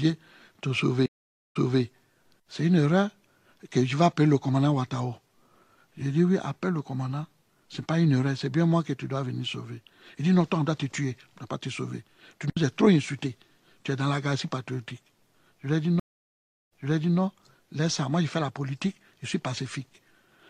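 The audio has two stream reconnects. At 1.06 s it goes silent for 490 ms, then resumes 261 ms earlier than where it stopped. At 16.0 s a 719 ms gap follows, and playback repeats 470 ms. Each time, the connection dropped, the player rebuilt its decoder, and the server resent recent audio.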